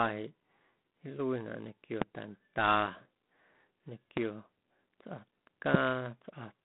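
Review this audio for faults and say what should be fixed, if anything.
The whole clip carries G.726 ADPCM damage at 24 kbit/s: speech confined to roughly 150 Hz to 3.6 kHz, nothing above 3.9 kHz, and a harsh, rasping hiss that rises and falls with the speech level. That level-tracking sets it apart from steady background noise. Sending the call over 32 kbit/s or a wideband codec would prevent it.

Three single loud pops sit on top of the speech at 2.02–2.04 s, 4.17–4.20 s and 5.74–5.77 s, each around 20 to 25 dB above it, with the speech continuing underneath. Unlike a dropout, nothing is lost. Each is likely a voltage step from a connector, switch or static discharge. Securing cables and grounding the equipment would prevent them.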